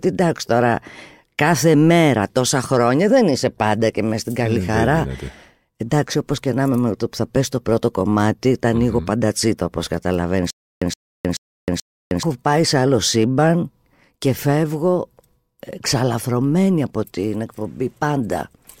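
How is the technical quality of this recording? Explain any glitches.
The recording has one clear playback glitch, in the speech near the middle. From 10.50 to 12.23 s there is a stutter with silent gaps: a 119 ms burst repeats four times, each followed by about 313 ms of digital silence, a 432 ms cycle. This is likely a stalled stream replaying its last buffered fragment at each retry, and the speech that should have filled that span is lost.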